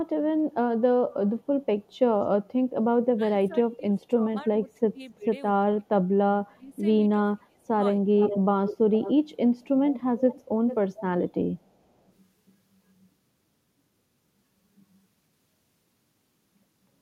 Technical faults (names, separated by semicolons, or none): speech suppressed in double talk; echo leak